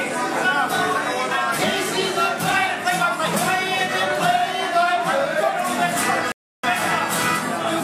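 At 6.32 s there's a rebuffering stall. The player ran dry on downloaded audio, so the sound drops out to silence and sits there until 6.64 s, when enough data has arrived to carry on. It picks up exactly where it left off, with nothing skipped or repeated, so what you notice is a dead gap of about 316 ms stretching the timeline rather than any missing material.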